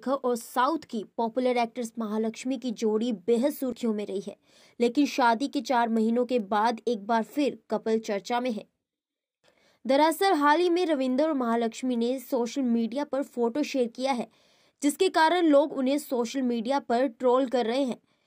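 Word clock ticks recur roughly every 0.4 s from 0.41 to 17.94 s, one-sample slips from clocks about 50 ppm apart; their steady rate distinguishes them from random clicks.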